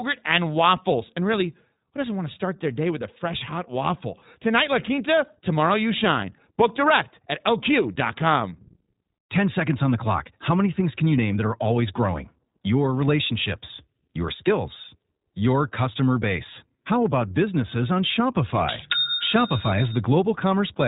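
The speech has passed through the iLBC codec for its whole length. Each short frame's excitation was coded on its own, without borrowing from the frame before, at a rate that fits 15.2 kbps with 20 ms frames. The codec keeps nothing above 3.8 kHz, so the speech sounds narrow and muffled at the top, and the coding damage is plainly audible as a rough, synthetic edge on the voice.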